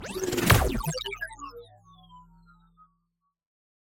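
No technical faults are audible.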